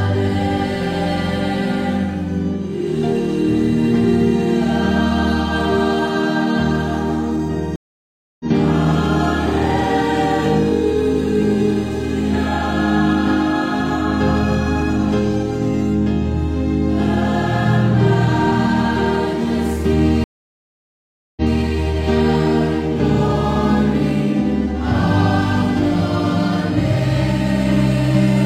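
At 7.76 s a stream reconnect silences the sound for 0.64 s. The connection dropped and a fresh decoder restarted mid-stream. Sound resumes roughly half a second later, so material is skipped. At 20.24 s another reconnect leaves 1.13 s of silence. It then resumes 0.19 s earlier, repeating sound.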